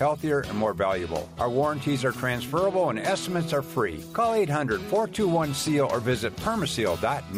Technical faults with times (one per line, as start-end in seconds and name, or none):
none